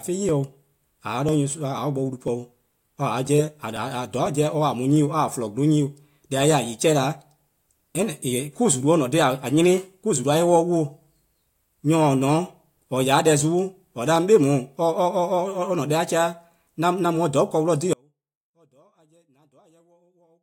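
At 17.93 s the speech drops out abruptly and does not return before the end of the clip. This is an audio dropout to a faint residue: the wanted signal was likely interrupted upstream while the rest of the chain kept passing audio. The remaining section holds only a faint trace of sound, roughly 35 dB below the normal level. The cut is instant, with no taper, so it sounds nothing like a natural pause or a fade.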